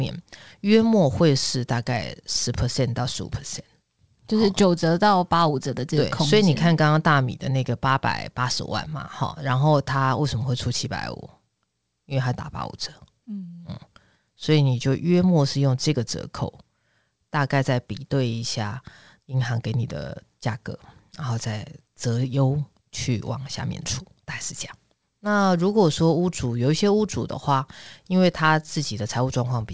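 Speech over a wideband call path, band-limited at 8 kHz as that codec is, with no faults to report.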